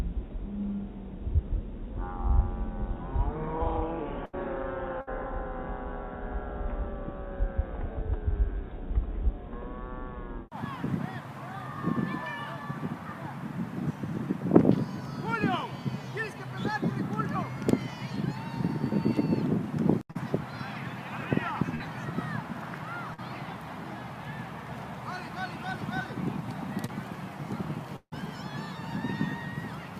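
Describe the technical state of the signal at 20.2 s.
Just before 20.2 s, from 20.11 to 20.17 s, there is a brief smeared wobble where the sound seems to stall and stretch rather than move on. It then blends back into the normal signal. This is short concealed packet loss. About 40 ms of audio never arrived in time to be decoded, so the receiver patched the gap with roughly 41 ms of synthesized continuation: repeating the preceding pitch, or shaped noise where there was none. It then cross-faded into the real audio that followed.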